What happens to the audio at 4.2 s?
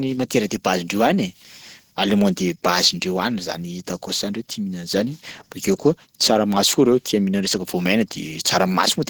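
At 4.2 s the speech sounds muffled, hoarse and grainy, as it does throughout the clip. The likely cause is Opus compression in its hybrid speech mode. Content still reaches 20.1 kHz, but plainly audible coding damage points to a low bitrate near 16 kbps.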